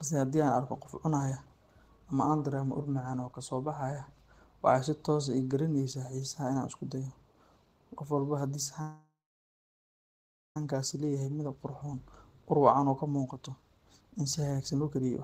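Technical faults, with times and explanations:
8.81–10.57 s, call audio freeze: the speech stops, and the last sound carries on for a moment as a fading buzz or hiss, then about 1.41 s of silence before the audio resumes exactly where it left off. Nothing is lost; instead a gap of about 1.74 s is inserted, most likely because packets were held up and the jitter buffer ran empty. On a spectrogram the final spectrum smears into flat horizontal streaks that fade to a blank band; the waveform decays to a flat line.
12.37–15.23 s, jitter buffer speed-up: to the end of the clip the speech runs at about 116% of normal pace with unchanged pitch, so it sounds hurried. The receiver, holding more audio than it wanted, cut many short pitch-period-sized pieces in succession, roughly half a second in total, to shrink the delay. On a spectrogram the harmonic spacing stays the same while syllables and pauses are compressed in time; the waveform shows tightly packed segments with many small joins.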